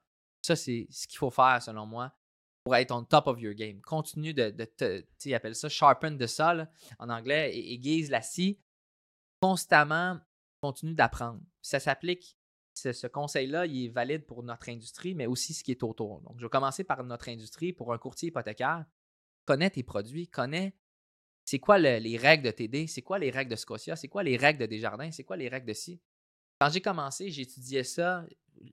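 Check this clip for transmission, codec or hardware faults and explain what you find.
One fault recurs throughout: clipped start after a pause. At 0.39, 2.61, 9.38, 10.58, 12.71, 19.43, 21.42 and 26.56 s, speech jumps abruptly out of silence with its first sounds missing. Each time, 46 to 54 ms is cut off. Every instance follows a gap of 0.39 to 0.84 s. The output device goes to sleep during these pauses and needs about 50 ms to wake and lock again, so the opening of each phrase is swallowed.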